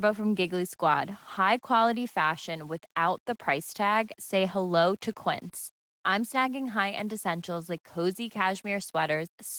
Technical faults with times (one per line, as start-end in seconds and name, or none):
0.00-9.59 low bit depth without dither